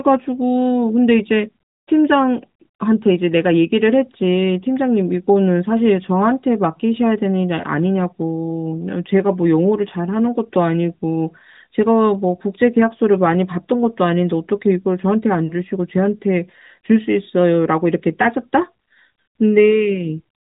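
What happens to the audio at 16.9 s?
Nothing goes wrong at 16.9 s: the speech there carries on intact, with no dropout, glitch or other fault, just the narrowband AMR mobile-codec sound that runs through the clip.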